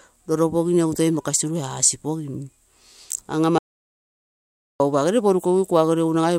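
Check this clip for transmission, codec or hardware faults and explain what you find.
One fault stands out. From 3.58 s to 4.80 s there is an audio dropout to silence lasting about 1.22 s. The speech cuts off mid-flow and returns abruptly. The gap is silent with no room tone. The input was likely lost while recording continued writing silence, so that stretch of speech is gone.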